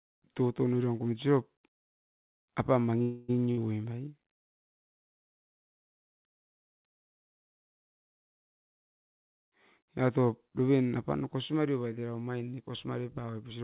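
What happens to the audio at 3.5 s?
A burst of packet loss hits from 3.51 to 3.59 s. Several packets' worth of audio never arrived in time, so the receiver filled about 58 ms by stretching the last sound it had and fading it down, heard as a brief smeared, dying tail. When playback resumes, about 60 ms of the speech is simply gone. Through the narrowband call path, with nothing above 4 kHz as G.711 mu-law would give, the concealed stretch sounds dull.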